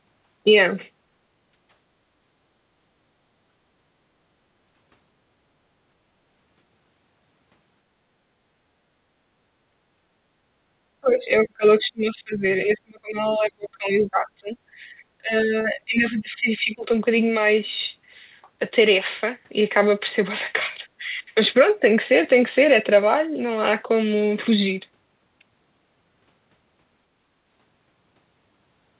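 At 3.51 to 3.65 s and again at 8.88 to 9.0 s, the room sound behind the speech briefly sinks, by about 11 dB at its deepest, then comes back within a fraction of a second. This is background gated by the echo canceller. While the far end was playing through the loudspeaker, the canceller clamped the microphone down, taking the ambient bed with it until it released.

From 11.0 to 12.44 s and 12.65 to 14.54 s, the talker's speech itself fades and breaks up, falling by roughly 30 dB in places. This is most likely speech suppressed in double talk: with both sides speaking at once, the canceller could not tell the local voice from loudspeaker echo and attenuated everything it picked up.

A shorter background dip follows at 14.82 to 14.88 s, only about 6 dB deep, from the same gating.

The speech drops out again from 15.18 to 16.88 s, down by around 25 dB, and once more, more lightly, at 20.99 to 21.23 s, around 10 dB. 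These are the same double-talk suppression, pulling the local talker down whenever the other side overlapped. Throughout, the call path's G.711 mu-law coding leaves nothing above 4 kHz.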